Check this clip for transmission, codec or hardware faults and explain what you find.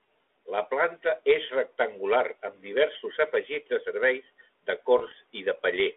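One transmission fault is audible, on a narrowband telephone line. Its 300 Hz to 3.6 kHz band sounds consistent with 32 kbit/s G.726.

From 4.98 to 5.12 s, just after "afegits de serveis de", there are bit errors on the ADPCM link. Flipped bits, well under one percent, upset the decoder's step size and prediction. The result is pops, a rough burst and brief level jumps.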